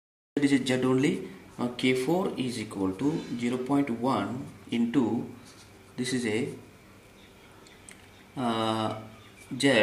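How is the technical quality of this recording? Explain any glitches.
The recording has one glitch, a cut-off start. For the first 0.37 s there is digital silence, and at 0.37 s the audio jumps in partway through a sound with no natural attack or fade-in. Capture or streaming began late, so the opening of that sound was never recorded.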